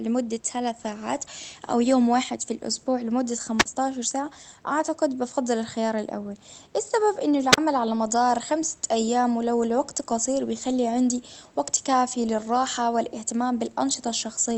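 The wireless microphone's radio signal twice faded far enough for the receiver's squelch to mute it: a wireless microphone squelch dropout at 3.58–3.66 s, after "واحد في الإسبوع لمدة", and at 7.52–7.58 s, after "الخيار الاول السبب إنه". Each is a flick of hiss, then a hole of near silence of 44 and 37 ms before the speech returns.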